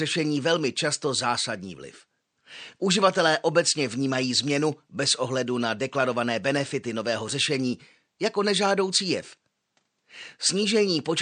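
From start to end, the speech sounds watery and swirly, with metallic chirps on s sounds and smeared attacks. This is likely MP3 compression at a low rate, such as 64 kbps. Unlike simple treble loss, the weak detail flickers on and off frame to frame.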